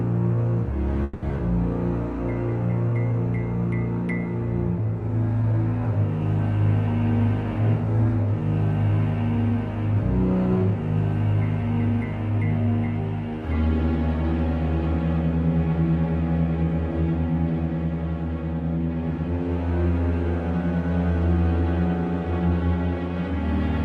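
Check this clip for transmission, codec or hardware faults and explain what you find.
There's one fault, a long network dropout, running from about 1.03 s to 1.32 s. Some 120 ms of the audio never arrives, and the receiver papers over the gap by stretching the last sound it had into a buzzy, fading fill lasting about 260 ms, with no dead silence. When the sound returns, the missing chunk is simply gone and the timing shifts by a few tens of milliseconds. Packet loss on the network is the likely cause. The call path itself is audible as a top end that stops around 12 kHz, which fits an Opus call codec running at a fairly modest bitrate.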